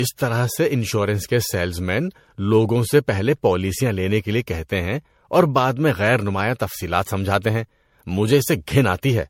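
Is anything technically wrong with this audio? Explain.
Yes. Throughout the speech there is generation loss, likely from being encoded around five times as MP3 at what sounds like 64 kbit/s. Nothing is present above 16.5 kHz. Attacks blur and the tone turns swirly and hollow. A single encode at that rate would sound cleaner.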